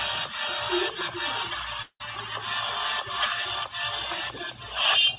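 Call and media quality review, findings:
Gap at 1.82–2.02 s: the sound smears into a fading buzz for about 0.18 s, then a short silence, then it picks up with roughly 180 ms gone for good. Likely a long network dropout: the jitter buffer ran dry, concealment stretched the last frame, then gave up. Bandwidth tops out at 4 kHz throughout, which is just the G.711 A-law call path at 64 kbps.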